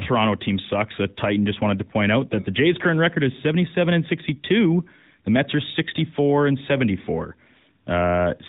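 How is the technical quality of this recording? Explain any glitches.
The recording carries one fault for its whole length: AMR narrowband mobile codec damage, plainly audible. The speech is cut off above 4 kHz and sounds buzzy and synthetic, consistent with a vocal-tract model excited by sparse pulses, which fits the 10.2 kbps mode.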